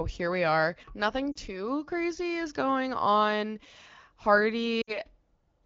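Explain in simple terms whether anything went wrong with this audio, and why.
Yes, something went wrong twice in this speech clip: lost AMR speech frames, at 1.32 to 1.38 s and again at 4.81 to 4.98 s. A radio error corrupted short pieces of the signal, and the phone's decoder filled in by repeating the last good sound while fading it down. Unlike a plain dropout, which cuts to silence, each spot quickly fades down to near silence and then recovers a little rough.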